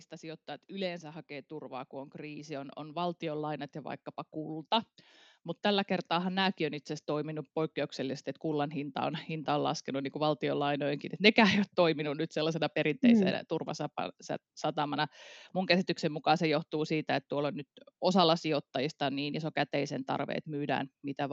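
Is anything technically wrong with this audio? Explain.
Yes. Automatic gain rising occurs twice: from 0.19 to 4.79 s, where the level climbs by about 9 dB, and from 5.62 to 9.0 s, by about 5 dB. The gain control judged the input too quiet and raised its gain step by step, so speech and background noise swell together over several seconds. That shared, slow rise separates it from a noise gate or noise suppressor, which would change the background independently of the speech.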